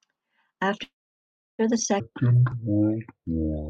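At 0.83 s the speech stops and the last sound smears into a short, fading buzz, then silence for about 0.67 s, before resuming at 1.61 s exactly where it left off. This is likely a call audio freeze: delayed packets emptied the jitter buffer, inserting a 0.76 s gap that pushes everything after it later.

From 2.0 s to the end, the speech turns deep and dragging, running at 0.564 times its proper speed with pitch dropped by roughly ten semitones. This section at the wrong speed was likely played against the wrong clock, so speed and pitch fell together.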